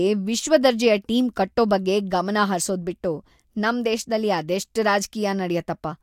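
Nothing stood out on listening to this speech recording.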